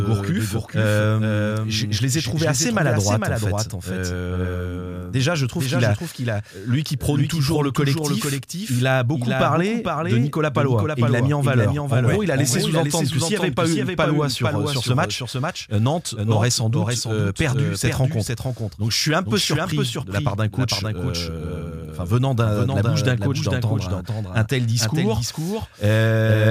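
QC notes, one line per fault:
Throughout, doubled audio track: the speech is accompanied by a second full-band copy about half a second behind, roughly 5 dB quieter, with no decay or room colour. This is likely a second capture path or misaligned edit. Spectrogram and waveform show every syllable pattern repeated, offset.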